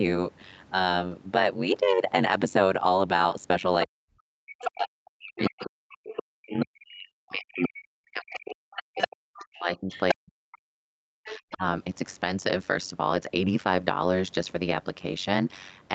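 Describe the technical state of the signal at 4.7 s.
At 4.7 s the overlap-add ripple is present, as it is across the whole clip. Frames are rejoined with a gain that doesn't sum flat, so the level swings about 60 dB around 100 times a second, giving a metallic buzz with extra tones around each note.

You're also inside the stretch from 3.85 to 11.64 s where the speech is pulled down, by as much as roughly 40 dB at its deepest. That's likely speech suppressed in double talk, with the echo canceller ducking the talker while the far end is active.

Right at 4.7 s a brief bit of the other side's voice leaking through is ending. It runs from 4.49 to 4.71 s and sits only a few dB under the speech, probably loudspeaker echo the canceller missed.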